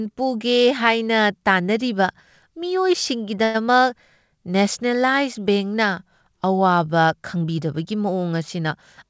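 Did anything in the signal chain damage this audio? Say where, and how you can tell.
Yes, a call audio freeze at the network and jitter buffer stage. Packets were likely held up, emptying the buffer at 3.44 to 3.56 s. The receiver stretched the last sound into a fading buzz or hiss for 104 ms, then resumed where it stopped, losing nothing but running 104 ms late.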